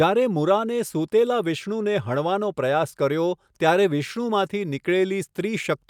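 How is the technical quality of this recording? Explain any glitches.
No glitches or faults are audible.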